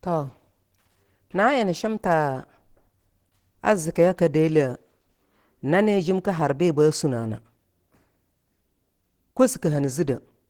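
Throughout the speech, the sound is hoarse, rough and grainy, with plainly audible coding damage, though the band still extends to about 20.2 kHz. This is likely Opus compression running in its hybrid speech mode, and the degradation fits a low bitrate near 16 kbps.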